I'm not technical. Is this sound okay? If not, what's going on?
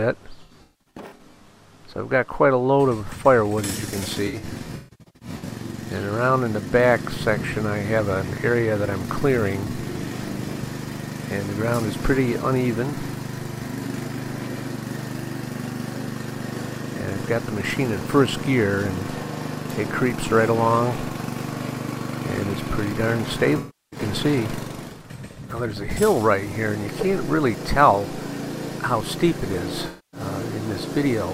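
No. The problem is AAC frame loss with concealment: small chunks of the compressed audio went missing, and the player patched the gaps by guessing from the last good moment. You hear brief smeared, noisy patches at 0.43–1.46 s, 4.27–5.48 s, 23.58–24.00 s and 29.87–30.20 s.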